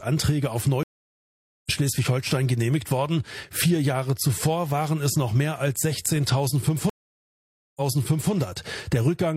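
At 0.83 s a stream reconnect breaks the audio: about 0.8 s of silence, then playback resumes roughly half a second further on, so material is skipped, not just muted. A second reconnect at 6.90 s brings nearly 0.9 s of silence, and the sound resumes 555 ms earlier, repeating a stretch already heard. Unlike a simple dropout, each gap ends with a jump in position and a soft fade-in as a fresh decoder starts up.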